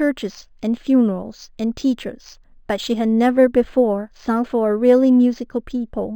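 Speech clip with imaging from linear upsampling throughout, which fits an 11 kHz source raised to 44.1 kHz. The top end sounds dulled, and faint mirrored images between 5.5 and 11 kHz, roughly 35 dB down, add a light metallic shimmer to sibilants.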